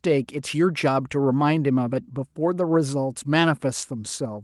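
No technical faults occur at any point in the speech, which comes through a call codec and jitter buffer working as they normally do.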